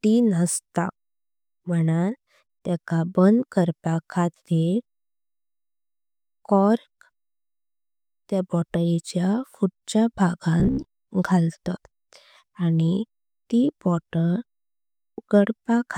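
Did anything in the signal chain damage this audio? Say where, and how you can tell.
Yes. Between 10.60 and 10.91 s the speech turns into robotic sound from repeated short buffers, a rigid metallic buzz at 66.7 Hz. The likely cause is a driver or buffer underrun, with one 15 ms block replayed in place of roughly half the missing audio.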